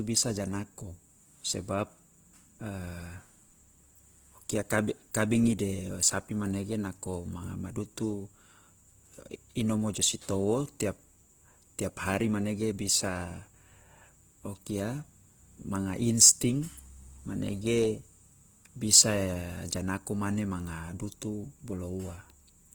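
Throughout the speech, the sound is grainy, rough and noisy in texture, with the damage plainly audible though the top end still reaches about 20.1 kHz. This is likely Opus compression in its CELT mode, filling starved bands with folded or noise content, which fits a low bitrate around 16 kbps.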